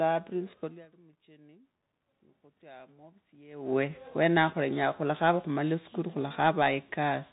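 Throughout the clip the speech is thin and boxed-in, with nothing above 3.8 kHz, a grainy hiss riding under the voice, and s sounds that come out scratchy and smeared. This is the Bluetooth CVSD headset codec. It codes each sample as a single up-or-down bit with an adapting step size, which fits a 64 kbit/s stream. Sharp, bright sounds move faster than the step can follow, so they break up, and the constant stepping leaves that fine granular noise beneath everything.

From 2.59 to 4.02 s the level swells gradually, by about 5 dB, and the voice and the room noise behind it rise together rather than the voice alone coming forward. This is automatic gain rising. The input had dropped by about 24 dB, around the point where the talker moves away from the microphone near 3.5 s, so the gain control judged the signal too quiet and slowly turned itself up, lifting the background along with the speech.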